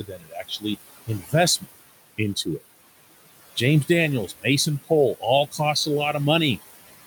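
A noise suppressor runs through the whole clip, pulling the room noise, which sits about 17 dB below the speech, down by about 16 dB frame by frame, so these noise suppressor artifacts leave the background pumping between and under phrases. Between 0.08 and 0.64 s the suppressor mistakes part of the speech for noise, dropping it by up to about 14 dB across roughly 300 ms, and again from 1.07 to 1.33 s by about 10 dB for roughly 150 ms, so those passages sound swallowed and faint.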